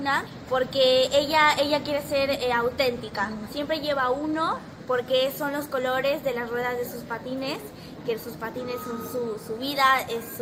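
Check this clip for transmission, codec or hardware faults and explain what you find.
No transmission, codec or hardware fault turns up anywhere in the clip.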